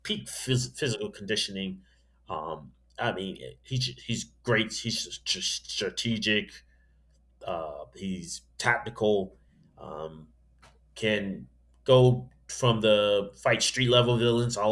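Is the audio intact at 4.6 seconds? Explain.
Yes, at 4.6 seconds the speech plays through cleanly, with no dropout, click or other fault at that moment.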